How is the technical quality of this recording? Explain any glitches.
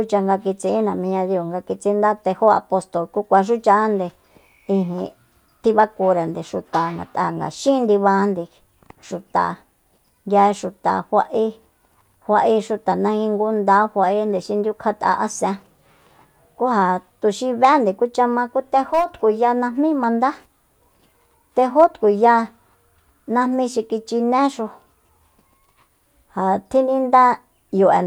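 No technical faults or glitches are audible here.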